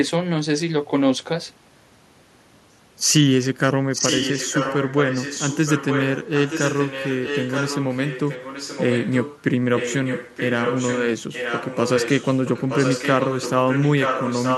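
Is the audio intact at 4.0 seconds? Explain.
No. At 4.0 s the speech carries an echo leak, running from 3.91 to 9.44 s. A delayed copy arrives about 0.92 s late, only slightly quieter than the original. The likely cause is a far-end echo canceller failing to remove its loudspeaker's sound.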